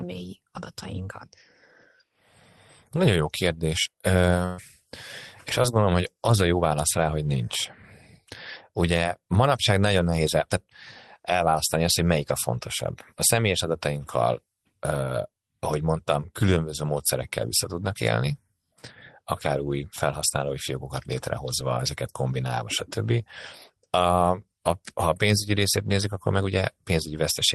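Speech carried over an Opus call path, with band-limited sound topping out around 12 kHz and coding noise consistent with roughly 24 kbps, shows a burst of packet loss from 4.45 to 4.60 s. About 120 ms of audio never arrived, and the receiver covered the hole with roughly 125 ms of extrapolated sound, stretching the last waveform and letting it decay. The result is a held, fading buzz or hiss, after which the speech picks up further along with that stretch simply gone. Lost packets rebuilt from error correction appear at the tail of that burst, 4.58 to 4.60 s, and again at 5.64 s. Each lost 20 ms frame was replaced by the low-bitrate redundant copy carried inside the following packet, so nothing drops out. Those frames come through coarser and noisier before full-quality frames return. A short concealed packet loss spans 5.62 to 5.75 s. About 20 ms went missing, and roughly 16 ms of synthetic continuation, built from the preceding pitch or shaped noise, was blended back into the real signal, adding about 10 ms overall. 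It is heard as a brief smear or wobble, the kind of glitch that can swallow a quick consonant.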